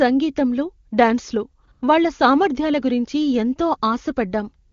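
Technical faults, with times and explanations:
1.65 s, 1.71 to 1.81 s and 4.69 to 4.73 s, AMR comfort noise: just before "వాళ్ళ సామర్ధ్యాల గురించి ఎంతో" the real background briefly gives way to a smooth, even hiss, first for a single 20 ms frame and then for about 100 ms, and again for the last 36 ms of the clip. The phone judged these moments silent and stopped sending speech. The receiver filled the gaps with synthetic noise built from a rough level and spectrum estimate.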